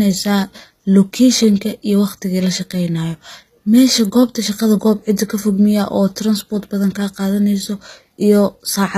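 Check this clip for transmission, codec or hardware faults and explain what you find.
One codec fault runs through the whole clip. HE-AAC compression is the likely cause, throughout: the speech treble is rebuilt by copying lower bands upward, with nothing above 14.9 kHz, fitting about 20 kbps, so s sounds turn gritty and lispy.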